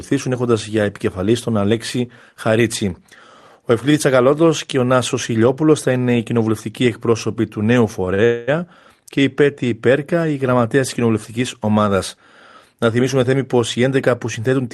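At 8.14 s, right after "κοινοβουλευτικοί εκπρόσωποι του νέου", there is a short stall from a late packet. A packet missed its slot and the jitter buffer ran dry. The receiver held the last sound for about 41 ms until the packet came in. Then the speech resumed from the same point, so nothing was lost. By 8.21 s it is over. The sound is briefly stretched, with a faint buzzy smear.

From 8.25 s to 8.49 s comes a call audio freeze, ending just before "και η". The likely cause is packets held up in transit, which emptied the buffer again. The receiver filled 228 ms by carrying the last sound forward as a fading buzz. It never drops to silence. The speech then picks up where it left off. No speech is missing, but a gap is inserted.

From 13.54 s to 14.68 s, after "θυμίσουμε θέμη", there is a jitter buffer speed-up. The buffer was holding more audio than it should. To cut the extra delay, the receiver trimmed many tiny pitch-length slices. 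Roughly a tenth of a second disappears. The speech runs at about 110% speed with its pitch unchanged. It sounds rushed.

The Opus call path caps the audio at 12 kHz, which fits a 32 kbps setting.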